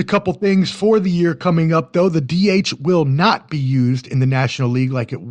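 At 0.41 to 0.46 s, just before "for the year coming", compressed frames are skipped. The speech lurches forward by about 20 ms, which fits a couple of 10 ms codec frames that were lost or rejected by the decoder. What sets it apart from a dropout is that no silence is left: time is simply missing.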